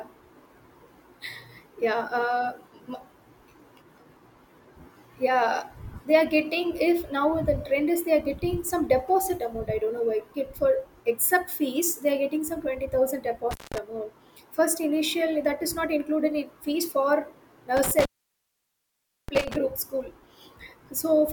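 Speech clip with two dropouts from an intermittent contact, where a loose cable or plug briefly breaks the signal path. The first runs from 13.51 to 13.78 s, with the line open for about 0.19 s. The second starts just after "in fees for" at 17.77 s and lasts until 19.56 s, with the line open for about 1.23 s. Each gap is bracketed by crackle as the contact breaks and remakes, and faint hiss remains while the circuit is open.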